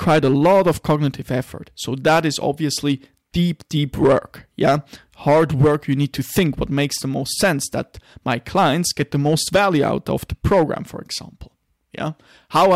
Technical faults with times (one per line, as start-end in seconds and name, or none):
0.00-12.75 hard clipping